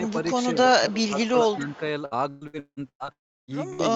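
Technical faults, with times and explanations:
0.06–0.27 s and 1.52–1.77 s, echo leak: a faint delayed copy of the speech trails the original by about 0.2 s. It is very quiet in the first stretch, about 25 dB below the speech, and clearly louder in the second, about 15 dB below. The likely cause is a far-end loudspeaker whose echo canceller let part of the pickup return. Unlike packet loss, nothing is missing. An extra, later layer is added on top.
0.80–1.18 s and 1.44–1.81 s, speech suppressed in double talk: the speech level dips while something else is present. The first dip is deep, roughly 15 dB over about 0.3 s. The second is shallow, roughly 5 dB over about 0.1 s, and it overlaps the second echo. The likely cause is an echo canceller turning down everything it could not separate. The sound fades in level but does not freeze or buzz, which is what tells it apart from network loss.
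2.05–3.09 s, repeated packet loss (robotic sound): six gaps fall within one second, the longest 174 ms. About half the span is patched by stretching the last sound, and roughly 540 ms of real audio never arrives. The rapid alternation of held fragments and fresh audio gives a choppy quality. A single dropout would leave one hole rather than this stuttering texture.
3.12–3.51 s, long network dropout: the last sound is held briefly, then fades, leaving about 0.33 s of silence before audio returns with around 360 ms of content missing. The likely cause is a stall in packet arrival long enough for concealment to give up. The result is a clear silent hole, far longer than a brief burst and without the repeated stutter of the span before it.
3.73–3.82 s, burst of packet loss: one short gap of about 60 ms. The receiver fills it by extending the preceding sound, which becomes a brief held buzz or fading hiss, and the audio then resumes with that slice missing. 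It is a single event too short to reach silence, unlike the dropout just before it.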